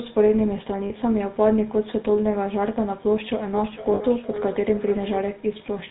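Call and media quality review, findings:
GSM full-rate codec, whole clip: buzzy, gravelly roughness on the speech, nothing above 4 kHz. Pulse-driven vocal-tract model keeping only every third excitation sample, which fits GSM full rate at 13 kbps. Damage plainly audible.

Lost GSM frames, 0.86–0.92 s and 3.94–4.01 s: brief rough, metallic ring where the sound gets held. Decoder repeats the last good frame's settings; 40 ms and 60 ms, which points to two and three dropped frames.

Feedback echo between two devices, 3.53–5.37 s: the speech comes back around every half second or so, thinner and ringier each pass, peaking at about 11 dB under the speech. A second device in the room is re-feeding the call, so the other device's canceller misses it.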